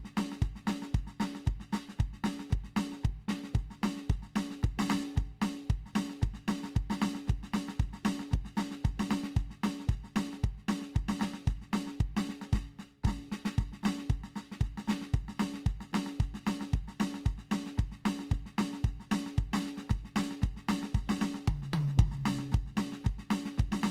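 A music clip with Opus compression throughout: tones sound rough and grainy, with noisy fill in the upper bands, most likely from a low-bitrate encode around 24 kbps.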